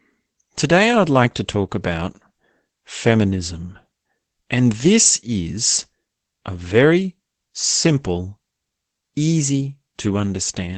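Opus voice compression runs through the whole speech clip. Nothing is heard above 8.8 kHz, so the sound is muffled. The SILK coder rebuilds speech from a coarse excitation, giving a hoarse, slightly robotic edge. This fits about 12 kbps.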